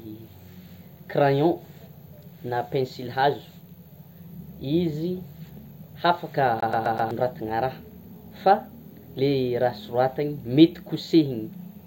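Speech, with a CD stuck on one turn from 6.60 to 7.11 s. A scratch keeps sending the laser back one track, so the same 127 ms of audio repeats four times, each jump marked by a brief mute. The result is a fast, even skipping-disc stutter.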